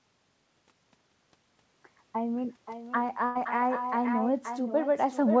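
Right from the start there's echo with no canceller: the talker's voice comes back about half a second later, about 8 dB down, a thin copy over the G.722 sound that stops at 8 kHz. At 3.26 to 3.37 s a burst of packet loss hits: about 93 ms of stretched, fading fill, then the audio picks up with roughly 100 ms gone.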